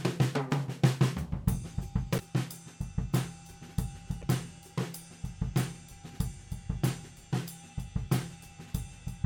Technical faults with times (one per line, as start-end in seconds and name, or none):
2.16-2.20 damaged data in a compressed stream
4.19-4.24 damaged data in a compressed stream